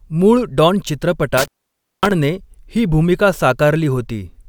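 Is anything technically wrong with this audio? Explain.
Yes, there's an intermittent contact from 1.38 to 2.11 s: a loose connection opens for about 0.55 s, so the speech drops out with crackle at each edge and faint hiss between.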